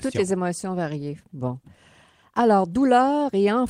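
No technical faults can be heard in this speech recording.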